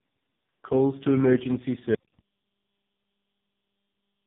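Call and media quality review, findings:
Tandem speech coding, throughout: rough, muffled, warbly speech, nothing above 3.8 kHz. Points to three speech coders in series, ending in low-rate AMR-NB, each re-coding the previous one's errors. Spectrogram: hard band edge at 3.8 kHz, smeared harmonics.

Audio dropout to silence, 1.95 s to end: speech cuts off abruptly and never returns. The gap is silent with no room tone. Likely input loss upstream of the encoder, which kept writing silence. Waveform: flat line; spectrogram: blank.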